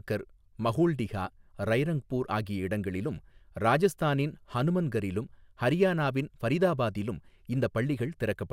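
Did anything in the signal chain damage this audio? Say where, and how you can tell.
No, nothing damaged this audio.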